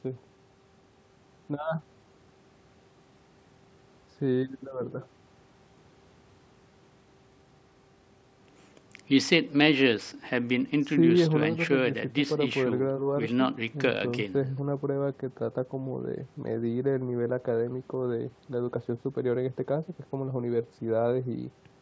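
Nothing in this speech recording stands out as a technical fault. The sound stops at 8 kHz, which fits a wideband call codec such as G.722, and the lowest bass is trimmed by the call's microphone processing.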